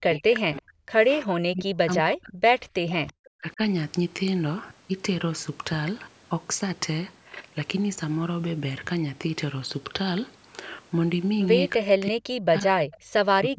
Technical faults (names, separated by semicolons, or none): speech suppressed in double talk; echo leak